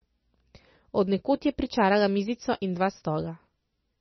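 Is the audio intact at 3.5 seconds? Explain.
No. At 3.5 seconds the speech carries the same degradation heard across the whole clip, most likely heavy MP3 compression at a very low bitrate, which fits something near 25 kbps. Starved of bits, the encoder discards all content above 5.9 kHz and zeroes weak frequency lines that drop in and out from frame to frame. The result is dull, band-limited audio with a watery, swirling texture, metallic chirps on s sounds, and smeared attacks.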